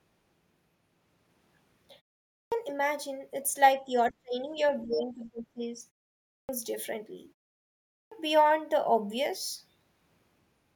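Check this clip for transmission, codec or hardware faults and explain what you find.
Three kinds of fault are audible in this speech: clipped starts after pauses, speech suppressed in double talk, and the other side's voice leaking through.

Clipped start after a pause, at 2.25, 6.23 and 7.83 s: the output device drops into sleep during short silences of 0.32, 0.4 and 0.57 s and needs time to wake again. About 0.27, 0.26 and 0.29 s of speech is lost each time, so the speech starts abruptly, missing its opening sounds.

Speech suppressed in double talk, from 3.82 to 4.62 s and from 4.82 to 5.81 s: the echo canceller likely mistook the talker for loudspeaker echo while both sides spoke, and pulled the level down. The speech sinks by roughly 30 dB and then 25 dB, thinning or cutting out in pieces.

Other side's voice leaking through, at 4.78 s for about 40 ms: part of the far-end signal likely survived the echo canceller and reached the microphone path. 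It comes through as a brief, faint scrap, around 30 dB below the talker's speech, just before the second suppressed stretch.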